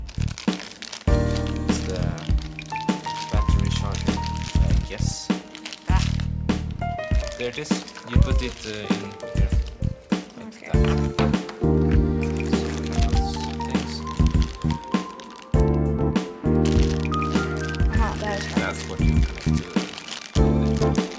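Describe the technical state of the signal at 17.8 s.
At 17.8 s the signal is intact, with no audible fault at that moment.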